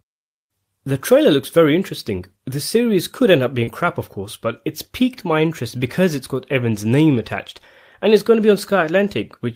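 At about 3.63 s, a short concealed packet loss occurs: roughly 40 ms of the speech stream failed to arrive at the decoder in time, and the receiver synthesised about 36 ms of replacement by extending the preceding sound before cross-fading back into the real signal at 3.70 s. The result is a brief smeared, wobbly patch in the speech.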